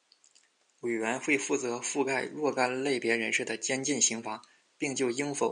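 A speech recording with no technical faults to point to. A faint room noise sits in the background, about 47 dB below the speech, and it comes from the space around the microphone rather than from anything in the system.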